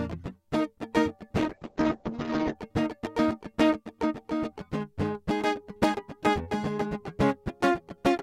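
A music clip with a call bitrate drop from 1.38 to 2.61 s. The top end narrows from 20 kHz to 8 kHz, and the music turns rough and watery. That fits the encoder being pushed from 64 to 8 kbps. Full quality returns after about 1.2 s.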